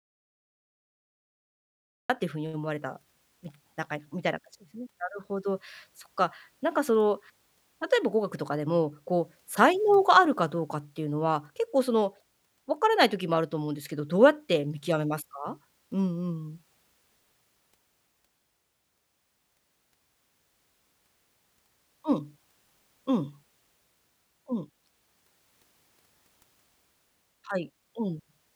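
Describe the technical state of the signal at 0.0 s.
An audio dropout to silence is already under way at 0.0 s and lasts until about 2.1 s: the signal is silent with no room tone, then speech cuts in abruptly, likely because the input was lost while the recorder kept writing zeros.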